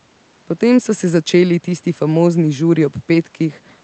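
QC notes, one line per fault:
Nothing stood out on listening to this speech clip.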